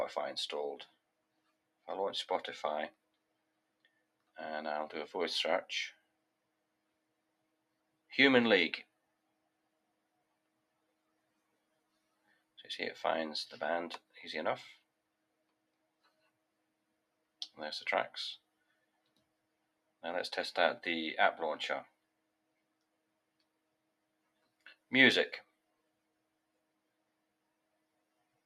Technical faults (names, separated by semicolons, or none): noise suppressor applied to music or sounds; sound cut by the noise suppressor